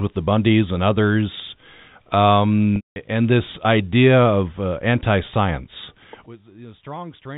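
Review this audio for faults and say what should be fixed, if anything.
Packet loss with pitch repetition occurs from 2.76 to 2.96 s. About 200 ms of audio is missing, which fits roughly ten 20 ms packets. The receiver repeats the last pitch period as a held, buzzy tone, then fades to silence. Speech returns with a short cross-fade. A larger jitter buffer or forward error correction on the link would prevent this.

From 6.26 s to the end at 7.37 s, the speech drops by about 20 dB and turns faint. The likely cause is one channel inverted. When the inverted channel is summed to mono, the centred speech cancels and only the small difference between channels remains. Checking polarity on both channels before the mono fold-down would prevent this.

The G.711 telephone coding limits the band to 4 kHz, and it is not a fault here.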